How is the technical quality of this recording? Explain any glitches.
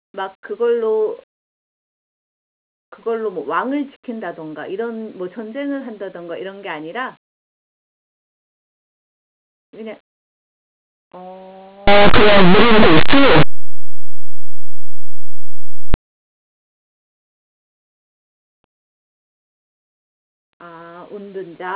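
There's one real glitch, a burst of harsh, very loud distortion partway through the speech. From 11.88 to 15.94 s it's linear audio read as companded: linear 8-bit samples get expanded as mu-law codes, so values just on one side of zero jump to the largest outputs while those on the other side stay small, producing a loud, ragged roar.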